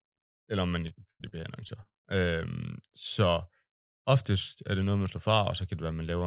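Right after "eller om man", from 0.88 to 1.95 s, there's repeated packet loss giving that robotic sound: about eight quick dropouts, the longest around 95 ms, each patched by stretching the previous sound, so the stretch turns choppy and robotic, with everything narrowed to below 4 kHz.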